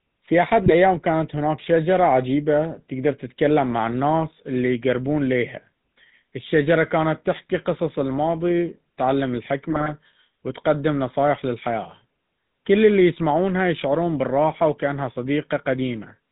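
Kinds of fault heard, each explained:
GSM full-rate codec: The speech has been carried through the original GSM full-rate coder, consistent with a 13 kbps channel. It rebuilds the sound from a vocal-tract filter driven by regularly spaced pulses, keeping only every third excitation sample and passing nothing above 4 kHz. Across the whole clip this is plainly audible as a dull, band-limited sound with a buzzy, gravelly roughness running through the speech.
GSM bit errors: Flipped bits from a poor radio link reached the speech decoder, corrupting the filter, pitch and gain values it relies on, so the damaged frames come out with a bent spectrum or a sudden level jump. This happens twice. A short burst from 0.66 to 0.73 s falls between "في أحد" and "كانت هناك شجرة عجيبة". A longer one from 9.70 to 9.89 s falls between "تحكي قصص الماضي تعلم" and "وتقدم نصائح للحياة". Both are heard as squawking, popping, gargled breakup.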